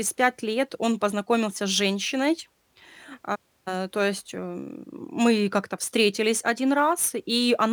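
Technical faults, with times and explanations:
Throughout, sample clock jitter: the converter's clock wanders by a few microseconds, so each sample is captured slightly early or late. The timing error becomes an amplitude error that grows with how fast the waveform is changing, putting a noise floor around 30 dB below the speech. The result is a hiss and grainy roughness that rides on the speech, strongest on loud, bright sounds and falling away in the pauses.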